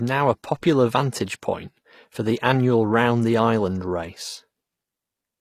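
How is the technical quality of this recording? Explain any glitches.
The recording has a plainly audible compression fault that runs through the whole clip. The damage is most likely from HE-AAC compression at a low bitrate, consistent with about 24 kbps. That codec spends its bits on the lower spectrum and fills in the treble by copying lower bands upward and shaping them with a rough envelope. The synthetic highs don't line up with the real harmonics, so sibilants in the speech come out gritty, metallic or lispy.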